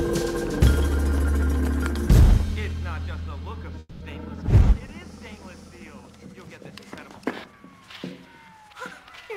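At 3.79 s the audio stops moving forward and the last sound is stretched out as a buzz or hiss that fades, ending in about 10 ms of silence before normal sound resumes at 4.02 s. This is a call audio freeze, likely caused by packets being held up in transit so that the receiver's jitter buffer ran empty. The 210 ms gap was filled by the receiver, nothing was lost, and everything after it plays 210 ms later.

From 9.23 s to the end at 9.37 s, the audio runs at about 136% speed with its pitch unchanged, so it sounds clearly hurried. This is a jitter buffer speed-up. The receiver found more audio queued than its target, as happens when delayed packets arrive together, and cut out short pitch-period-sized pieces in quick succession to reduce the delay. About 50 ms of audio was dropped this way.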